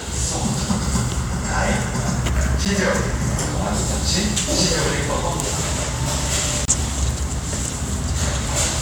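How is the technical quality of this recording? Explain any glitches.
Two brief dropouts interrupt the sound: a gap between stream segments at 2.65 s (about 10 ms) and again from 6.65 to 6.68 s (about 30 ms). The events fall about 4 s apart, which fits 4-second segments whose timestamps leave a small hole that the player fills with silence. Nothing is lost, but each becomes a hard-edged click-like break, seen as a flat silent stretch in the waveform and a thin vertical blank stripe across all frequencies on a spectrogram.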